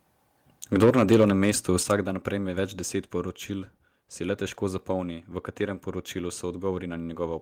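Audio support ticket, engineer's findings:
Microphone overload, 0.75 to 1.3 s: harsh, crackling edge on the loudest syllables, peaks flattened. Likely cause: mic input gain set too high, driving the converter about 6 dB past its limit and clipping around 7% of samples.

Microphone volume stepped down, 0.84 s and 1.83 s: abrupt level drops, about 2 dB then about 6 dB, the second just before "dan prejme več". Likely cause: call software's automatic gain control reacting to the clipping and cutting device input gain in single steps.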